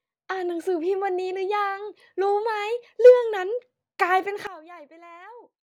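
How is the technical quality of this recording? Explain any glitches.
The recording has one clear glitch. A sudden gain jump at 4.47 s drops the speech and background noise together by about 18 dB until the end, likely from a gain setting applied without a ramp.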